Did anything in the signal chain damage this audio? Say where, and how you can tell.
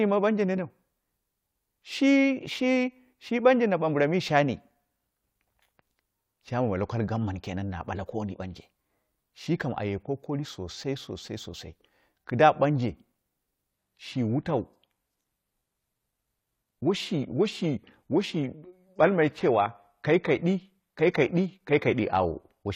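Yes. From 13.71 s to the end, the speech drops to an adaptive stream at a lower bitrate, a network fault. The quality changes suddenly and artefacts rise, with no gap. On a spectrogram the upper band abruptly drops away, with nothing above 14.9 kHz, while the waveform stays continuous. This fits a switch from 96 kbit/s AAC to 20 kbit/s HE-AAC.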